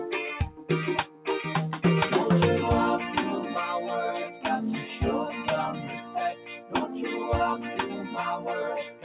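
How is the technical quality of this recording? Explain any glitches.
The technical quality is compromised by a speech-tuned noise suppressor acting on non-speech sound, and the band stops at 4 kHz, which fits a G.711 mu-law call path at 64 kbps.

Throughout, a noise suppressor applied to music or sounds treats sustained tones, ambience and decays as noise. The gain swings by around 10 dB as it reacts, so transients pass while held material sinks, giving an audible pumping and thinning of the texture.

Sound cut by the noise suppressor occurs at 0.50–0.70 s and 1.06–1.26 s (about 9 dB down), 4.27–4.45 s and 5.77–6.15 s (about 7 dB), 6.33–6.74 s (about 8 dB), and 7.57–8.17 s (about 5 dB). In each, steady or fading content is pulled down, so its level sinks or its tails are cut short.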